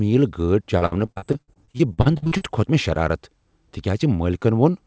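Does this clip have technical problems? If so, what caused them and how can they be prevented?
Yes. From 0.78 to 2.43 s the speech turns choppy and robotic. This is repeated packet loss: 17 short gaps, the longest 59 ms, each patched by stretching the sound just before it, so about a third of that stretch is filler. Unlike a single dropout, the holes recur roughly every tenth of a second, which gives the robotic sound. A larger jitter buffer, forward error correction and a steadier network connection would prevent it.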